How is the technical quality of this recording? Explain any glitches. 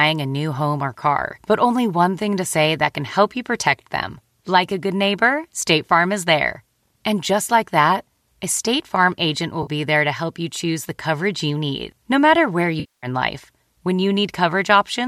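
The recording has two audible dropouts, both AAC frame loss with concealment. The light coding texture throughout is likely from low-delay AAC compression (AAC-ELD) at 64 kbps.

At 9.63 to 9.70 s, a brief smeared, noisy patch replaces about 40 ms of sound. At 12.80 to 13.07 s, a longer gap of about 230 ms decays to a very faint noise floor and fades back in before normal audio resumes. In both places, compressed frames never reached the decoder. It filled the holes by reusing the last good spectrum with altered phase or interpolated energy. Because the fill is an imitation rather than the real signal, it sounds noisy or phasey. The durations fit frames of about 10 ms.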